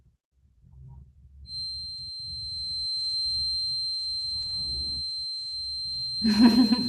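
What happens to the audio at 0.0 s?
Nothing goes wrong at 0.0 s: the speech starts intact, carried through the WebRTC call path with no fault at that moment.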